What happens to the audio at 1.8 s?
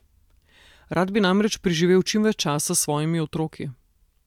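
Nothing goes wrong at 1.8 s; the speech there plays through intact, with no dropout, click or distortion.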